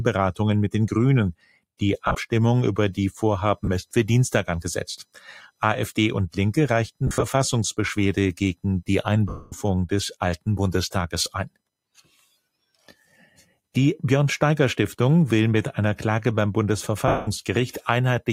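Throughout the clip, load changes in the computer shift the audio circuit's shared ground. This computer activity noise comes through as a faint buzzing chirp pulsing at around 1 kHz, roughly 45 dB below the signal. It rises and falls with what the machine is doing, not with the sound. Alongside it, a noise suppressor built for speech is applied to music or sounds. It treats sustained tones, ambience and decay as noise, so levels pump by a few decibels, with attacks passing while held material and tails sag.

From 1.34 to 1.81 s the suppressor misjudges the sound as noise. For part of that stretch it cuts the level by as much as about 21 dB, so a sustained or fading portion sinks abruptly while sharper onsets hold. It happens again from 11.95 to 12.25 s and from 12.75 to 13.54 s, each time pulling the sound down by up to about 12 dB. Decays end early and the texture thins.

The Bluetooth link drops LE Audio frames at six points. 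The LC3 decoder fills each gap by repeating the last spectrum with randomised signs, then fading it. The first gap spans 2.05 to 2.15 s, where 70 ms of audio is lost in short scattered bursts. Brief gaps follow at 3.65 to 3.69 s and 11.24 to 11.26 s, each a momentary noisy blur. A broken stretch from 7.07 to 7.24 s loses 110 ms in pieces, the longest about 70 ms. The two longest losses run from 9.29 to 9.52 s and 17.08 to 17.28 s. In these, tones smear into hiss and then fade away toward silence before the signal returns. The lossy coding itself leaves only light traces.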